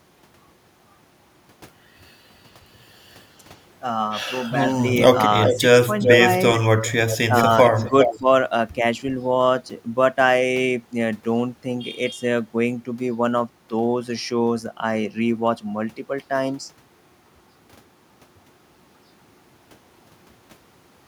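A far-end echo canceller likely failed to remove its loudspeaker's output, so an echo leak sends the speech back about 0.4 s late. It first appears faintly from 4.7 to 4.8 s at about 25 dB below the direct sound. It returns at about the same level as the speech from 5.45 to 5.59 s and from 5.99 to 6.22 s. From 6.54 to 8.19 s a longer trailing copy runs about 5 dB down.

Where the canceller faced both sides at once, it likely mistook the talker for echo and attenuated it, giving speech suppressed in double talk. Between 5.52 and 5.91 s the voice dips by about 5 dB in brief patches totalling about a tenth of a second. Between 7.3 and 8.27 s it sinks by about 10 dB for around 0.3 s in all.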